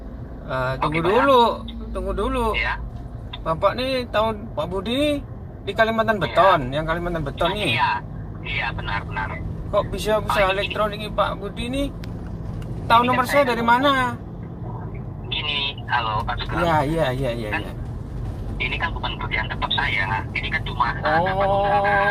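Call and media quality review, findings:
Nothing stood out on listening, and no symptoms turned up that would need a ticket entry.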